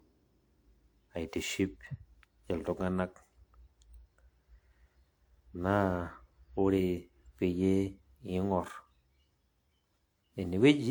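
Generation loss runs through the whole speech recording, sounding swirly, smeared and hollow with blurred attacks, though content extends to about 20.1 kHz. It fits WMA at around 128 kbit/s, likely re-encoded roughly seven times, each pass requantising on a shifted frame grid.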